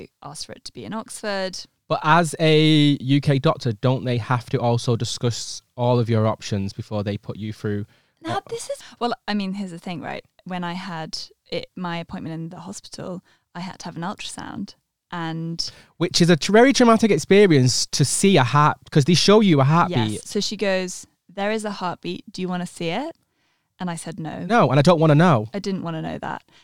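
No technical faults can be heard anywhere in the recording.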